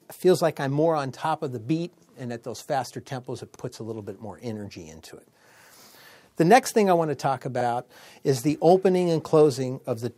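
A short stutter at 3.56 s makes a 50 ms stretch of the audio, ending at 3.61 s, play twice in a row, so the sound briefly jumps back before carrying on. This is an overlapping chunks fault. The audio was handled in blocks of about 4 s, and at this join the next block began 50 ms before the previous one had finished, so the overlapping piece is heard a second time.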